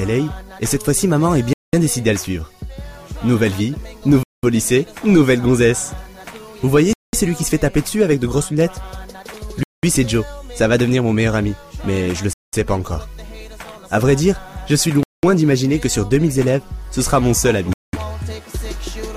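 A gap between chunks opens at 1.53, 4.23, 6.93, 9.63, 12.33, 15.03 and 17.73 s. Each is a 0.2 s hole after every 2.5 s of audio. No sound is missing, because playback resumes where it stopped, and the strict 2.7 s rhythm distinguishes these gaps from random dropouts.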